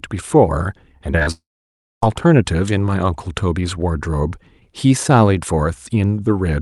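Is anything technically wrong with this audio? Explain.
Yes. From 1.12 to 1.27 s there is repeated packet loss with a robotic sound: four short holes, the longest about 35 ms, each patched by stretching the preceding sound, so roughly half that span is synthetic. Because the gaps are brief and close together, it sounds choppy with pieces missing.

From 1.31 to 2.07 s a long network dropout is the likely cause of what follows. The last sound is carried on as a fading buzz, then about 0.6 s of near-silence sits where audio should be, and the sound resumes without the missing part. That single long hole separates it from the stuttering just before. The audio passed through a call path whose high end stops near 12 kHz, consistent with Opus.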